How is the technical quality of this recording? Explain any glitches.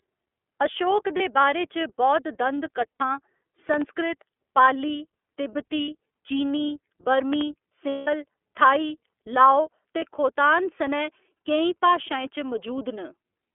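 The speech carries narrowband codec damage throughout, with several brief dropouts and two pairs of pops.

iLBC codec: the whole clip is limited to roughly 300 Hz to 3.4 kHz and sounds rough and synthetic, which fits iLBC's 30 ms frame mode at about 13.3 kbps.

Lost iLBC frames: at 1.17, 2.94, 5.82, 7.89 and 9.99 s, the decoder fills missing frames by repeating the last pitch cycle with noise. Each gap is 30 to 60 ms of buzzy held vowel, except at 7.89 s, where 180 ms fades out.

Loud pop: at 3.74 and 7.33 s, a pair of sharp pops rises about 10 dB above the speech, which continues underneath. These are likely voltage transients from a plug, switch or driver.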